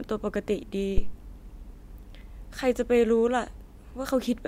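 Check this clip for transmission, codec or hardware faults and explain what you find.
One hardware fault is present in this speech clip: a phantom power thump from 0.98 s to 1.18 s. A supply voltage on the live microphone input was switched, and that sudden DC step passed through the input's coupling capacitors as a single low-frequency pulse. It sounds like a deep, dull thud peaking at about -10 dBFS. The thud falls away quickly, decaying with a time constant of roughly 46 ms, so the bump is brief and sits low in the spectrum.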